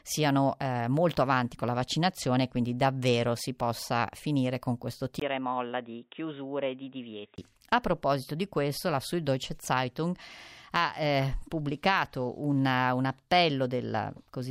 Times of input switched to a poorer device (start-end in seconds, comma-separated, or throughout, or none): 5.20-7.38